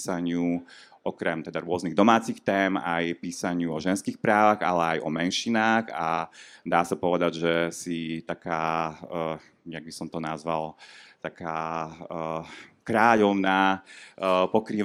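Listening to the speech here, nothing stood out as a technical problem at any point.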